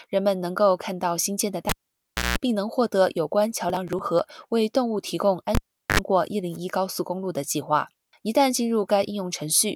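In this speech clip a live cable is pulled and plugged in twice. At 1.69 to 2.38 s it drops out for 0.64 s, with a 185 ms burst of 60 Hz mains buzz as the tip reconnects. At 5.55 to 6.00 s it drops for 0.40 s, with 75 ms of 50 Hz buzz. Each event is bracketed by pops. Between them, at 3.69 to 4.19 s, processor overload crackle appears as the processor repeatedly misses its deadlines for small buffers of around 10 ms. The skipped buffers leave a string of hard-edged gaps, heard as gritty tearing over the sound.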